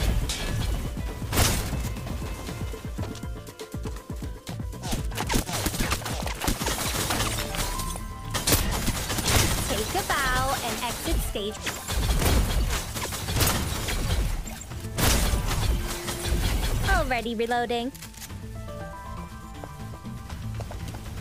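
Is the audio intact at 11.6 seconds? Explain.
No. From 11.57 to 11.60 s there is a brief glitch, roughly 30 ms long, where the sound breaks into a chirp, squawk, click or short hole before the signal carries on. This is damaged data in a compressed stream. Some of the encoded bytes at that point are corrupted, so the decoder either misreads those frames or throws them out, loses its place, and has to hunt for the next valid frame header before clean playback can resume.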